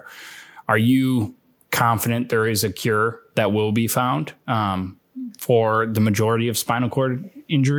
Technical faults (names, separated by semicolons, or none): none